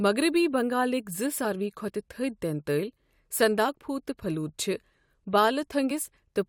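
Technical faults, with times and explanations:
1.44 s, 3.68 s and 5.90 s, damaged data in a compressed stream: three brief glitches cut into the speech, each over in a split second. At each point a stretch of the compressed data is corrupt, so the decoder cannot read the frame properly, loses its place in the stream and hunts for the next valid frame header. The disruption during that search is what comes through as the short glitch.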